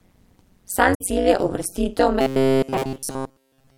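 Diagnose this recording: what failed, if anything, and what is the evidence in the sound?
The speech passes through a frame-based processing stage (call processing or a codec's overlap-add resynthesis) whose windows do not sum to a constant gain. The result is overlap-add ripple throughout: the level swings by about 60 dB once per frame, at a rate of around 200 Hz. At that rate the swing is not heard as separate dips but as a metallic buzz with extra tones around each note, laid over every syllable.

At the codec or storage stage, the compressed stream is damaged between 0.93 and 1.01 s, just before "cilj je uvrstitev". The decoder misreads the corrupted frames, loses sync and hunts for the next valid frame header. That 90 ms stretch comes out as a short glitch rather than speech.

From 2.21 s, right after "cilj je uvrstitev", to the end of the clip, the speech turns into robotic sound from repeated short buffers. 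The likely cause is the driver or buffer stage starving: fresh audio stops arriving, so essentially all of the output is a replay of the last short buffer while the real signal is skipped. The repetition imposes a fixed metallic buzz at 133 Hz, which fits a buffer of roughly 7.5 ms.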